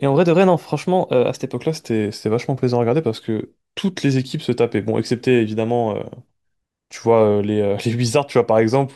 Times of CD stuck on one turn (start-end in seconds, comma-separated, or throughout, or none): none